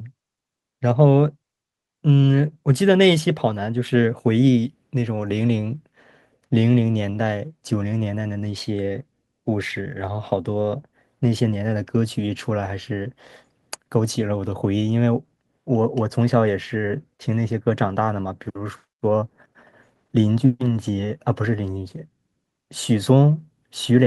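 Listening through the speech, nothing stood out as a technical problem at any point.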